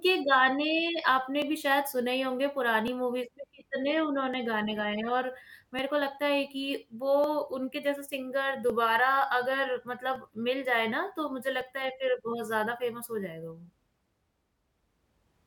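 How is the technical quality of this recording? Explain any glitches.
The recording has one recurring glitch. Clock drift buffer slips occur about every 1.46 s, from 1.42 s to 14.52 s, roughly ten times. They are likely caused by two devices whose clocks disagree by around 0.1%, so a buffer drifts until a short block of a few dozen samples is dropped or repeated, heard as a regular click in the speech.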